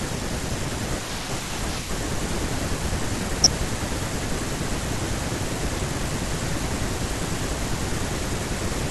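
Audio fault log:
3.44–3.56 s and 5.90–6.11 s, DAB burbling: brief bursts of burbling over the speech as residual bit errors put noise blips into individual sub-bands and knock them out of level for up to a frame.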